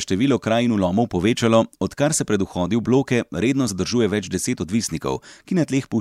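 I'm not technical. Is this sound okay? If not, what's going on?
No, there is one small glitch. At about 3.67 s, just after "bloke redno", the speech jumps forward by roughly a thirtieth of a second. This is called compressed frames skipped. The audio is stored in short chunks, here about one chunk, each around 26 ms long. That chunk was lost or too damaged to play, so it was dropped. The chunks overlap slightly, so you hear a quick smeared blip rather than a sharp click.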